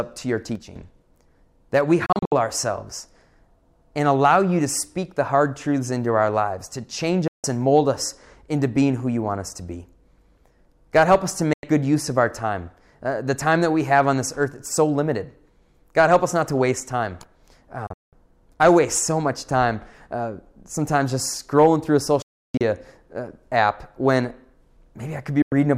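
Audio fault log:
0.55–0.76 s, one channel drops out: just after "to your", the level falls abruptly by about 6 dB for roughly 0.2 s, then returns to its previous level. The likely cause is one side of a stereo feed going missing, so the mono sum carries only half of the material common to both channels. Anything present only in the lost channel would vanish for that stretch.
2.06–2.32, 7.28–7.44, 11.53–11.64, 17.87–18.13, 22.22–22.61 and 25.42–25.52 s, digital broadcast dropout: the receiver mutes with a 3 ms fade whenever incoming frames fail, and the audio sent during each mute is lost. The gaps last 96–352 ms. Some are broken into several short holes: after "that we", within 256 ms; before "I waste so much", with a 192 ms run; and at 22.2 s, with a 320 ms run. The gap lengths fit frames of about 32 ms.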